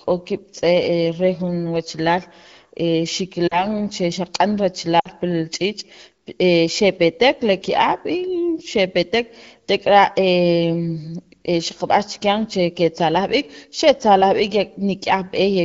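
At 3.47 to 3.65 s and again at 4.99 to 5.08 s, the speech smears and fades where lost AMR speech frames, about 40 ms and then 60 ms of audio, were concealed by repeating the last good pitch and vocal-tract settings at falling gain.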